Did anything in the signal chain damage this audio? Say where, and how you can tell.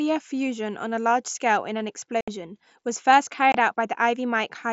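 Yes. Unconcealed Bluetooth headset packet loss on the headset-to-phone radio link leaves two abrupt holes at 2.21–2.28 s and 3.52–3.55 s. They show as flat, square-edged gaps in the waveform and spectrogram. The 68 ms gap fits roughly nine dropped 7.5 ms mSBC packets, with nothing concealing them.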